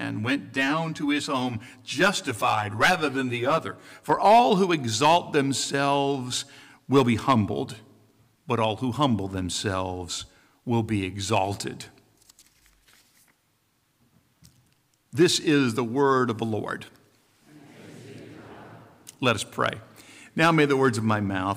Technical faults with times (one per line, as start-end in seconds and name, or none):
0.00-4.10 channel delay (comb filtering)